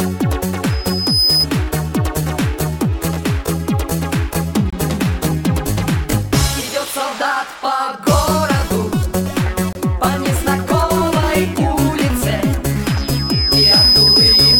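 From 0.69 to 1.47 s, a loudspeaker feedback squeal appears. A single tone near 5 kHz swells up over about half a second. It then sits roughly 5 dB above the rest of the sound. A microphone is hearing the speaker it drives, and at 5 kHz the loop gain tops one. That frequency feeds on itself, so it grows.

Next come two short gaps between chunks, at 4.70 to 4.73 s and 9.73 to 9.75 s. Each hole is 25 ms of silence. They fall 5 s apart, which matches the audio being handled in 5-second chunks. Nothing is missing from the sound. Each join is just delayed, so the flow stops and restarts abruptly.

At 12.83 s the feedback squeal returns at the same 5 kHz pitch. This time it builds more slowly, over roughly 0.7 s. It settles at about 5 dB above the signal again. It keeps ringing until the clip ends at 14.59 s, so the loop was never broken here.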